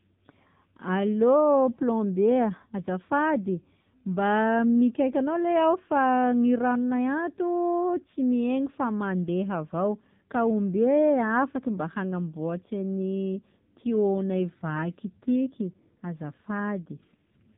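AMR narrowband mobile codec damage runs through the whole speech clip: nothing above 3.8 kHz survives, and the heavy buzzy, synthetic coloring fits a low 6.7 kbps mode.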